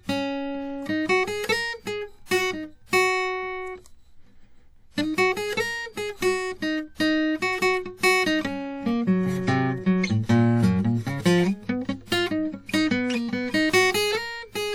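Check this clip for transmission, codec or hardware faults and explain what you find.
Two faults are present in this music clip: transform-codec damage across the whole clip, and one pre-echo on an attack.

WMA compression is plainly audible from start to finish. Sustained sound has a ringing, washy quality. A hiss rises and falls with the level of the music. Nothing is present above 19.6 kHz. This is likely Windows Media Audio, with the damage pointing to a low bitrate near 48 kbps. The encoder quantises each block of the spectrum coarsely, and its noise spreads across tens of milliseconds. Weak spectral lines are dropped to zero, which thins the texture.

Pre-echo occurs from 2.26 s to 2.31 s. A short burst of hiss arrives about 53 ms before a sharp attack. The codec spreads its quantisation noise evenly over a whole block. This attack falls late in its block, so noise sized for the loud onset also fills the quiet stretch before it. 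The attack sounds softened and smeared, as if it begins slightly early.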